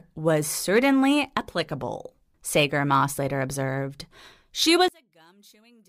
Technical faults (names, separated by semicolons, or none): one channel inverted